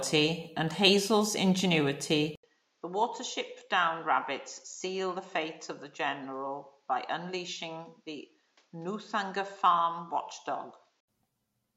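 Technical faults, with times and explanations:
2.35 to 11.08 s, input switched to a poorer device: after an 80 ms silence the speech turns duller and drops by about 10 dB, with nothing above 7.6 kHz and a new noise floor about 40 dB down, likely a change to a narrower-band microphone or headset profile.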